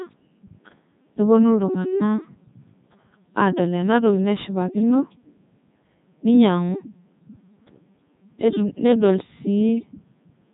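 Speech passed through the Codec 2 vocoder, whose heavy damage fits its 3.2 kbit/s mode, so only pitch, voicing, energy and a rough spectral envelope survive. The rebuilt sine-wave voice sounds buzzy and robotic throughout, with nothing above 3.8 kHz.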